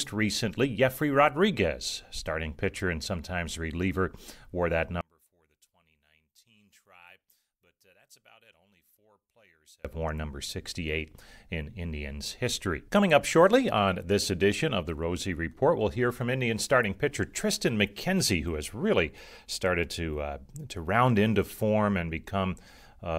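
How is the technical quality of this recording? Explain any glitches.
The recording has one clear glitch. From 5.01 to 9.85 s the speech suddenly collapses to a faint trace, dropping by about 33 dB before returning at full strength. The likely cause is one channel inverted: one side of the stereo pair has reversed polarity, so when the two channels are summed to mono, the centred speech common to both cancels almost completely, leaving only the small difference between them.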